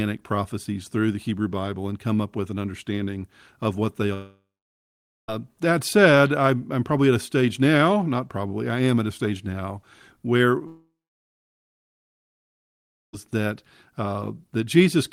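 At 4.13 s and again at 10.67 s the speech cuts out, likely from a long network dropout. A brief fading buzz gives way to near-silence lasting about 0.84 s and 2.22 s, and the speech resumes at 5.29 s and 13.14 s with the lost audio missing. The spectrogram shows smeared energy decaying into blank gaps.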